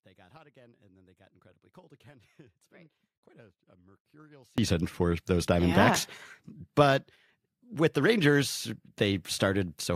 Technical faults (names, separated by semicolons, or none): audio dropout to a faint residue